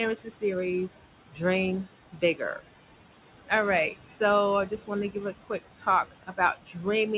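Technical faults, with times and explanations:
Throughout, noise suppressor artifacts: The room noise, which sits about 13 dB under the speech, drops away in the gaps and swells back under each phrase. The voice sits in a narrow band that stops at 4 kHz, as G.711 mu-law would. A suppressor is pulling down, frame by frame, every band it judges to be steady noise, by about 17 dB.
0.16 to 0.43 s, 1.31 to 1.41 s, 1.85 to 2.66 s and 4.69 to 6.85 s, speech cut by the noise suppressor: Within these spans, parts of the speech sound swallowed or suddenly faint, with drops of about 12, 16, 18 and 18 dB at their deepest. The affected parts are short, roughly a tenth of a second in each of the first two, a fifth of a second in the third and close to three quarters of a second in the last. The suppressor mistook these quieter stretches of speech for background and turned them down along with the room noise.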